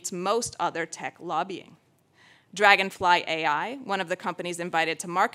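No technical faults can be heard anywhere in this audio. Nothing in the signal path draws attention to itself at any point.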